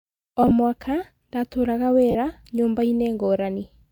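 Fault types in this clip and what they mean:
lost LE Audio frames: the Bluetooth LE Audio link dropped frames, and the LC3 decoder covered each gap by repeating the last good spectrum with randomised signs. Between 0.43 and 0.51 s, about 30 ms of isolated losses are scattered over 80 ms, each gap around 10 ms, which fits 10 ms frames, so the speech flutters with brief grainy patches. At 2.11 to 2.15 s a single 40 ms run turns the speech into a short, noisy smear.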